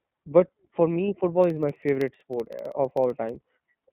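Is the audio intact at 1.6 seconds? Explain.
No. At 1.6 s the sound falls inside a run of periodic USB or driver dropouts that begins at about 1.44 s, just after "but for me football", and lasts until about 3.61 s. A blocking background task interrupts the audio path every 64 ms, and each time a tiny sliver, roughly a tenth of a millisecond, is replaced by silence. The result is a steady train of ticks riding on the speech. On a waveform these appear as evenly spaced brief notches. On a spectrogram they show as thin vertical lines, 64 ms apart, running through the whole band.

The iLBC codec also affects this moment, as it does the entire clip. It codes each frame's excitation independently, and the blocky character fits 30 ms frames and the 13.33 kbps mode. Nothing passes above about 3.8 kHz, and low frequencies thin out below roughly 150 Hz, so the speech sounds narrow, slightly rough and synthetic. 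A spectrogram shows a hard ceiling near 3.8 kHz with empty space above it, and some smearing at frame boundaries.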